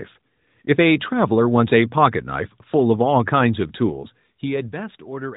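No faults heard in this speech recording.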